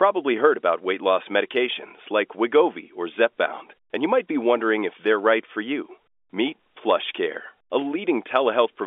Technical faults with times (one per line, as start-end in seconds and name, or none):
none